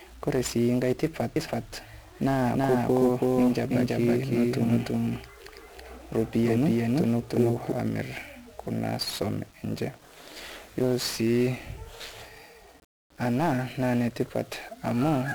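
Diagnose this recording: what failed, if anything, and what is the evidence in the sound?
The codec stage failed for the whole clip. The speech is fuzzy and crackly from start to finish, and the treble sits under a dense bed of hiss. That points to 1-bit DFPWM compression, at a rate that fits about 48 kbps. The encoder keeps only one bit per sample, nudging an adaptive level up or down. The coarse steps leave strong broadband quantisation noise, and here the damage is heavy.

A doubled audio track runs from 1.36 s to 7.72 s. A second full-band copy of the speech trails the original by roughly 300 ms, at about the same loudness. It carries no decay or room colour, so it is not an echo. It starts abruptly at 1.36 s and stops just as abruptly at 7.72 s. The likely cause is a second capture path or an edit that left two copies out of step.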